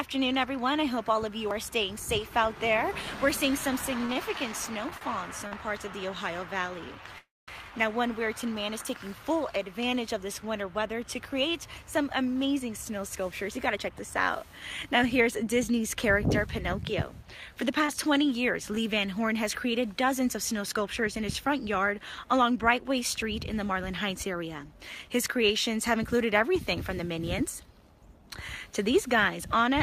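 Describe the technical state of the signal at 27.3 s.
At 27.3 s the signal is inside a jitter buffer speed-up running from 19.65 to 27.82 s. The receiver is trimming short pitch-period-length segments repeatedly to drain excess buffered delay, about 150 ms in total, so the sound plays roughly 2% fast at unchanged pitch.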